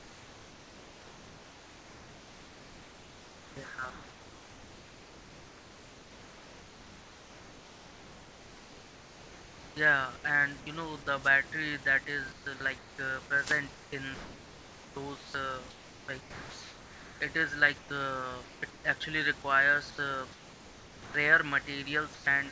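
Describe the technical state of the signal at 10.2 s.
At 10.2 s the clip is just ending a stretch of comfort noise in place of the background, running from 0.0 to 10.24 s. A steady, featureless hiss stands in for the real room noise, likely because the sender paused transmission while no speech was detected. Unlike a gate or dropout, it never falls to silence.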